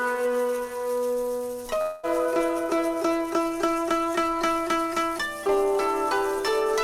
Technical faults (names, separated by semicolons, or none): long network dropout